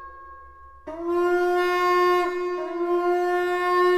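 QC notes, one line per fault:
No faults found in the clip. Nothing calls for attention.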